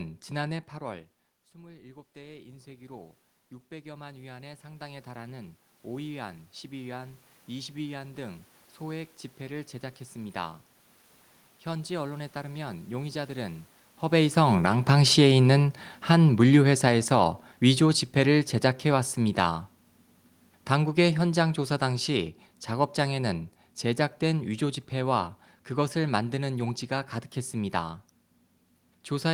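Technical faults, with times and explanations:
0.79–10.48 s, automatic gain rising: Just after the talker moves away from the microphone, around 0.5 s, the input level drops by about 21 dB. The gain control responds by raising its gain about 17 dB over nearly ten seconds. Because the gain applies to the whole signal, the voice and the room noise swell together. The slow climb is the controller's release time, and it never quite recovers the full 21 dB loss.
14.04–19.48 s and 20.71–26.6 s, automatic gain falling: Around 14.0 s the talker moves. The gain control finds the input too loud, or its background noise too strong, and pulls its gain down by about 10 dB over roughly five seconds, then by a further 5 dB between 20.71 and 26.6 s. The voice sinks gradually, with the room noise sinking along with it. This shared fade is what identifies the change as gain control rather than the talker.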